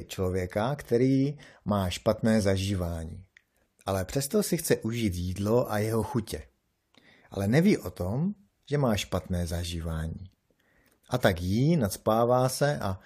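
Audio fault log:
No fault is heard in this speech clip.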